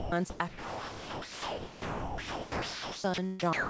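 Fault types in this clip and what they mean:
Sound dropped by the voice detector: speech repeatedly turns into comfort noise, longest from 0.48 to 3.04 s, likely as the sender's detector took it for background.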